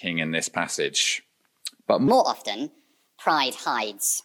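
From 2.08 s to the end, a wrong sample rate kicks in: the sound plays about 1.38 times too fast and 5.5 semitones sharp, which fits 32 kHz material run at 44.1 kHz.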